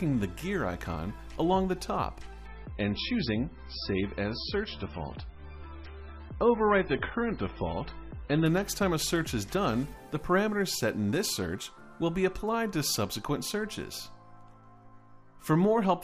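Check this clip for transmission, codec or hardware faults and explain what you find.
One transmission fault appears: an adaptive stream at a lower bitrate. From 2.46 to 8.46 s the treble suddenly vanishes above 5.6 kHz and the sound turns dull and smeared, then returns, with no gap. The stream switched to a lower-bitrate MP3 version, which fits a drop from about 128 to 16 kbit/s.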